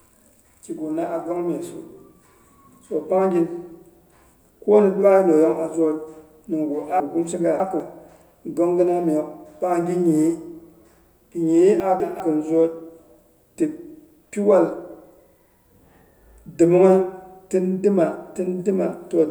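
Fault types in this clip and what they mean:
Chunks out of order: Blocks of 200 ms play out of sequence. Nothing is lost. From 7.0 to 7.8 s one block arrives three places late. From 11.8 to 12.2 s one lands a place late. Both sound jumbled.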